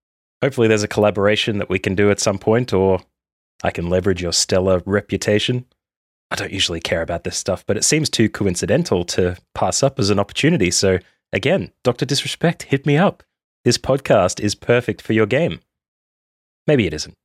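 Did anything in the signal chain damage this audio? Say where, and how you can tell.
No, nothing in this speech recording stood out as damage from any stage of the signal chain on listening.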